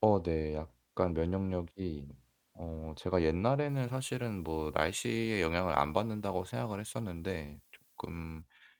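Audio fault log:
3.69 to 8.42 s, pre-emphasis left on: from 3.69 s the speech turns abruptly thin, glassy and hissy, with sibilants spitting and the body of the voice receding, until 8.42 s. The treble lift matches a 75 µs FM emphasis curve, raising 10 kHz about 13 dB relative to 1 kHz, and the complementary de-emphasis that should flatten it again was never applied, so that boost stays baked into this stretch.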